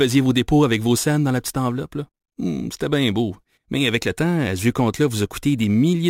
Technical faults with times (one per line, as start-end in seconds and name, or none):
0.00-6.09 crude rate conversion